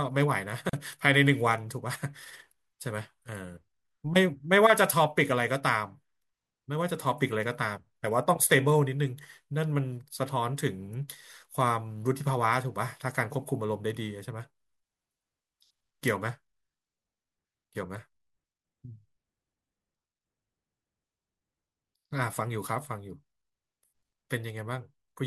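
A speech clip with one gap at a join of encoded pieces. At 0.69 s the sound drops out for about 38 ms and returns at 0.73 s. The codec smears the edges of the silence, so the fully silent part is shorter than the gap itself. The speech then resumes exactly where it broke off, with nothing lost. This points to two separately encoded pieces spliced without trimming. The encoder's start-up delay and the padding of the final frame were left in at the seam.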